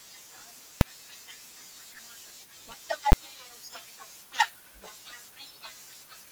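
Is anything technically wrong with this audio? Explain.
Yes. At 0.81 s and 3.12 s, invalid numbers at full scale: a calculation produced infinite or invalid values, pinning blocks of about 2.7 ms and 10.7 ms at maximum level. Each is heard as one sharp, very loud bang in the speech.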